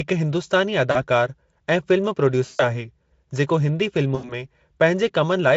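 VoIP packet loss concealed by the speech codec occurs at 0.91–1.02 s (about 40 ms lost), 2.45–2.78 s (140 ms) and 4.15–4.45 s (80 ms). The Speex decoder extrapolates the missing frames, so the speech smears into a buzzy tone or coloured noise that fades, and stays weak briefly after recovering.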